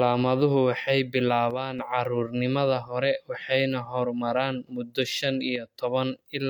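Around 1.51 to 1.79 s and again from 5.56 to 5.75 s, the speech suddenly dips by about 6 dB. That's likely one channel dropping out, so the mono sum loses half its level until it returns.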